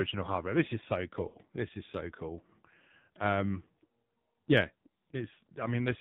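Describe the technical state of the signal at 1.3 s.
At 1.3 s the signal sits inside a burst of lost AMR speech frames, from 1.28 to 1.37 s, just after "is so". The decoder repeats the last good pitch and vocal tract settings at falling gain. The sound stretches, warbles and sags toward silence. The gap fits about three lost 20 ms frames.

Underneath is the AMR narrowband mobile codec. Nothing above 4 kHz survives. The speech sounds heavily buzzy and synthetic, which fits a low bitrate near 6 kbps. Few pulses per frame drive a simple vocal tract model, so detail smears.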